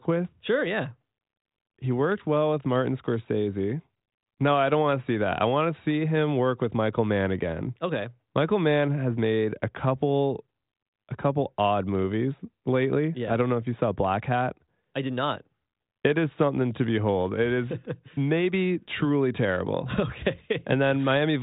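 It's a speech recording that comes through a G.726 ADPCM telephone path at 40 kbit/s, with the band topping out around 3.9 kHz, and there's nothing technically wrong to point to anywhere in it.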